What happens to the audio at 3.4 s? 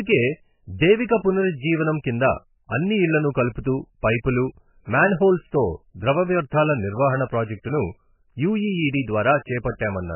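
At 3.4 s the speech carries the same heavy damage present through the whole clip, which is likely MP3 compression at a very low bitrate, consistent with roughly 10 kbps. Nothing is left above 3 kHz, so the top end is cut off flat. With so few bits, the encoder drops weaker frequency lines that then flicker on and off between frames, giving a watery, swirling texture, metallic chirps on s sounds, and smeared attacks.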